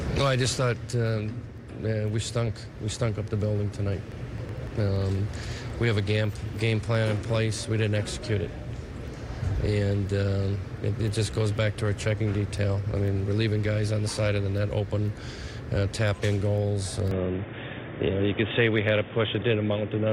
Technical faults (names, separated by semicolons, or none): train of clicks; input switched to a poorer device